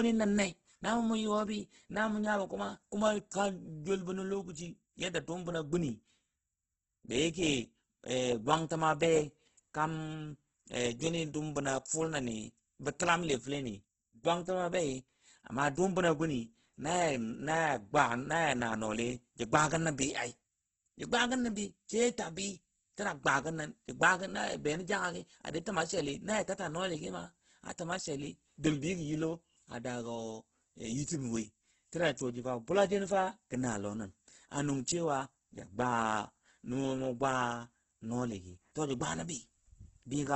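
Throughout, the speech stops at 8.2 kHz and sounds grainy and rough. Starved bands are refilled with noise. This is heavy Opus compression, likely near 12 kbps.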